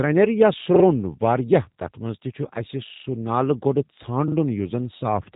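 Throughout, the speech passed through a G.729 codec, most likely at 8 kbit/s, which rebuilds it from a coarse pulse model, leaving it roughly synthetic with nothing above 3.8 kHz.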